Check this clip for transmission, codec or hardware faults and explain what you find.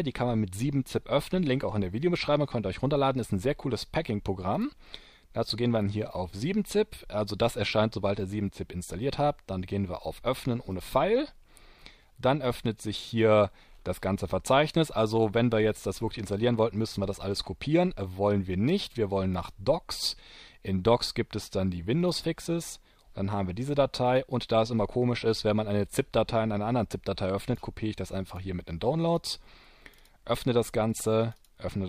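One hardware-type fault runs through nearly the whole clip.

Clock slip clicks, from 0.12 s to 31.87 s: a rapid, even series of tiny ticks, about one every 30 ms, merging into a soft rattle that is strongest on loud, high or sustained passages. The likely cause is two devices running on unsynchronised clocks that differ by roughly 700 ppm, so a single sample is dropped or repeated each time the drift reaches a whole sample.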